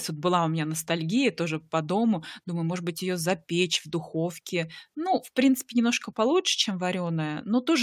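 Speech recording with no audible technical faults anywhere.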